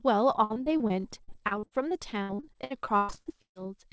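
From 0.44 s to 3.57 s the speech breaks up with repeated packet loss (robotic sound): 25 separate holes, the longest 136 ms, with roughly a third of that span patched over. Each hole is filled by stretching the last fragment of sound, so the speech turns choppy with pieces missing rather than simply silent. That recurring, chopped pattern sets it apart from a single isolated dropout. Nothing sounds above 8 kHz, which fits a wideband call codec.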